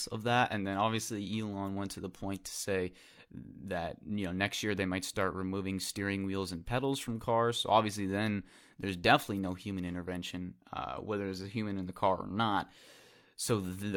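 Nothing goes wrong anywhere in the recording; the speech just runs along without a single technical hiccup to point at.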